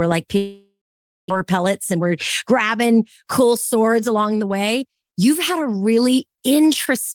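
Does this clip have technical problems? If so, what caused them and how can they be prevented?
Yes. From 0.37 to 1.32 s there is what sounds like a long network dropout, likely a stall in packet delivery. The receiver smears the last sound into a fading buzz, then leaves about half a second of near silence. Unlike a short concealed loss, roughly 0.6 s of speech never returns. Prevention: use a more stable network path or add redundancy such as forward error correction.

From 1.44 to 5.20 s, just before "had a", a jitter buffer speed-up follows. Packets that arrived late and bunched together left too much audio queued, and the receiver trimmed pitch-period slices to catch up. The speech runs about 8% faster, losing roughly 0.3 s, but the pitch stays the same, which rules out a resampling error. Prevention: limit delay spikes so the buffer doesn't overfill and need draining.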